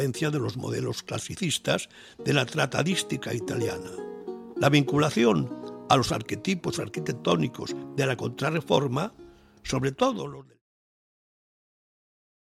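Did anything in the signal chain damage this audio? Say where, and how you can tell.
No; it simply fades out, ending around 10.6 s.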